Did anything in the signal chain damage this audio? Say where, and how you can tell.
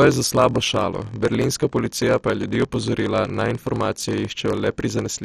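Yes, two things. At the buffer stage there's a steady 43.1 Hz buzz through the whole clip, and the speech runs at about 0.94 times normal speed with its pitch intact. That's a padded block size mismatch: each block that fits a 1024-sample read comes up short, and the gap gets zero-filled.

The codec stage is the other. It's dull, with nothing above 13.8 kHz, and there's a heavy gurgling, granular texture with upper bands flickering in and out. That's likely MP2 compression starved of bits, which points to something around 56 kbps, so whole sub-bands get dropped and the rest are coarsely quantised.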